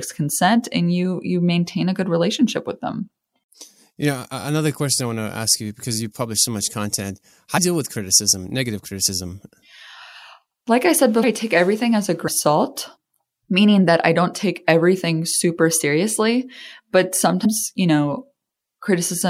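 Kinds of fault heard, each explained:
Compressed frames skipped: the speech lurches forward at 7.57, 11.22, 12.27 and 17.44 s, dropping roughly 150 to 200 ms each time, which fits whole frames of about 26 ms lost from the encoded stream. It falls just before "deal with criticism negative" and just after "take everything as a" and "everything super seriously but". Unlike a dropout there is no silent gap, and unlike a splice there is no hard click, only a brief smeared blip.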